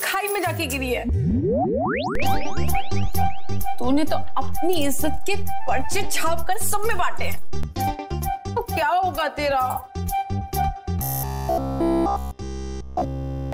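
At 2.15 s the baseline jumps with a low thump. That's a DC step, an offset in the zero line that holds until it drops back at 7.63 s with another thump. From 10.99 s to 13.53 s the sound turns into a rigid metallic buzz at 66.8 Hz, robotic sound from repeated short buffers, likely from a roughly 15 ms chunk being looped throughout while fresh audio goes missing.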